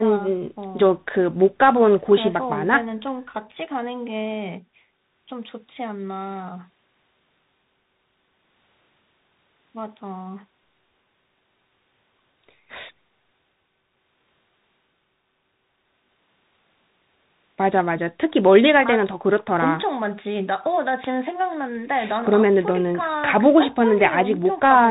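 Throughout, the speech carries Bluetooth CVSD headset codec damage: the band stops at 4 kHz, s sounds turn scratchy, granular hiss persists, consistent with 64 kbps one-bit delta coding.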